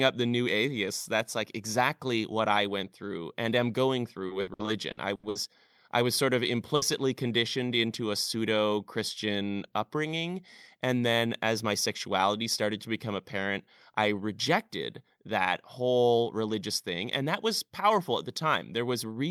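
From 4.27 to 5.38 s the stream suffers repeated packet loss: packets went missing or arrived too late seven times in quick succession, and each hole was bridged by extending the preceding sound. About a third of that stretch is concealment, roughly 360 ms of it, with gaps up to 80 ms and around 240 ms of speech gone. The speech turns choppy and robotic, with pieces dropped out.

At 6.76 s a single burst of packet loss lasts 90 ms, to 6.85 s. The receiver covered the first 60 ms by stretching the last sound and letting it fade, which comes through as a brief held buzz or dying hiss. A further 60 ms of speech is simply lost, so the audio picks up further along with that fragment missing.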